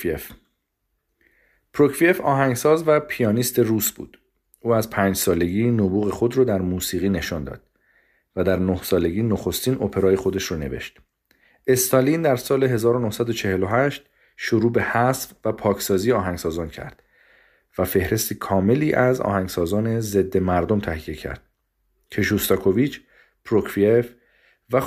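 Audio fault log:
The speech signal shows no audible technical fault at any point in the clip.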